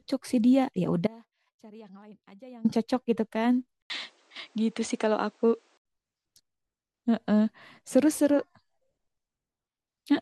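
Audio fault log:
1.07–2.65 s, audio dropout to a faint residue. The speech cuts out abruptly for about 1.58 s. Only a faint trace remains, roughly 25 dB below normal. The path stayed live, so the likely cause is signal lost upstream while the input kept running.
3.82–5.85 s, input switched to a poorer device. An 80 ms silence marks the switch. Then nothing above 9.4 kHz passes, so the sound turns duller. A new noise floor sits roughly 45 dB down. Loudness barely changes. A microphone change is the likely cause.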